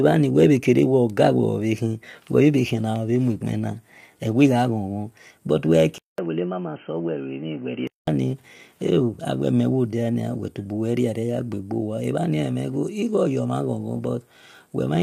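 Speech throughout carries a rough, grainy texture, with noise filling the gaps between pitch harmonics and a thin, somewhat synthetic top end. This is plainly audible damage from low-delay AAC compression, likely AAC-ELD at a rate consistent with about 32 kbps. Its very short frames smear harmonics, unlike the swirly, watery artefacts of ordinary low-bitrate MP3 or AAC. From 5.98 to 8.07 s the input likely switched to a poorer device. After a 200 ms gap the sound turns dull and boxy, with nothing above 3.1 kHz, a level a few decibels lower and a faint new noise floor well below the speech. It clears again at 8.07 s. The silence at the switch and the change in level and noise mark a device change rather than a simple low-pass filter.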